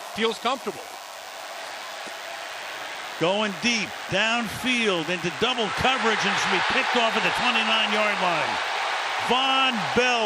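A nearby DECT cordless phone or base station is pulsing every 10 ms and the audio circuit rectifies it, laying a thin, steady 100 Hz DECT buzz, rich in harmonics, about 20 dB below the audio throughout.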